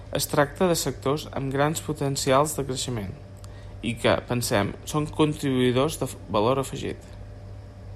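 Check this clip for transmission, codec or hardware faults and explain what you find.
No transmission, codec or hardware faults can be heard anywhere in this speech recording, which comes through as a steady, uninterrupted signal.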